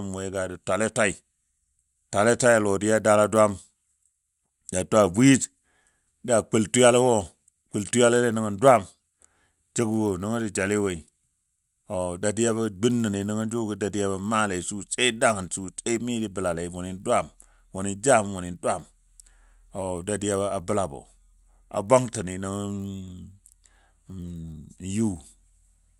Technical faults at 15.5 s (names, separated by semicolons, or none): resampler restarted on every block